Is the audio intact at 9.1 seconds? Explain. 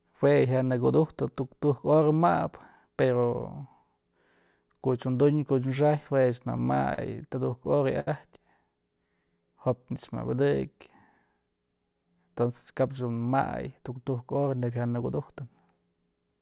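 No. From about 9.06 to 10.15 s there is a jitter buffer slow-down: the receiver, short on buffered audio, repeated single pitch periods to rebuild its reserve, adding 58 ms and running the speech at 96% speed. It sounds slightly slowed and drawn out, with the pitch unchanged. A waveform shows repeated, near-identical pitch cycles, and a spectrogram shows harmonics stretched in time but level in frequency, all below the 4 kHz band limit of the call path.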